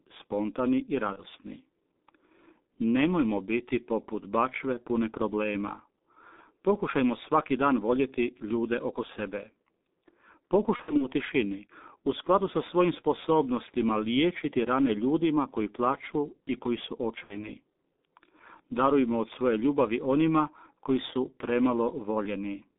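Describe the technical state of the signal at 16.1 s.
At 16.1 s the speech carries G.723.1 codec damage, present across the entire clip rather than only at this moment. The sound is confined to roughly 200 Hz to 3.7 kHz, and the heavy, hoarse graininess and smeared consonants point to a very low rate near 6 kbit/s. Its long 30 ms frames and slowly updated voice model cause the smearing. A plain telephone band-pass filter would give the same muffled band with clean, crisp consonants.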